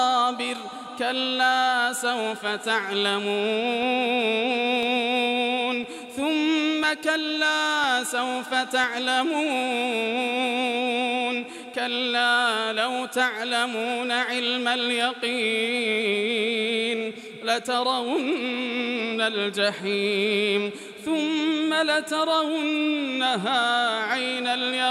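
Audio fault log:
3.83–8.84 s: periodic USB or driver dropouts. Regular ticks once per second, each about a millisecond of sound replaced by silence as the driver or bus briefly stalls.
5.69 s, 15.01 s: dropped samples. A single sharp click at each time, likely a couple of missing samples making the waveform jump abruptly between non-adjacent values.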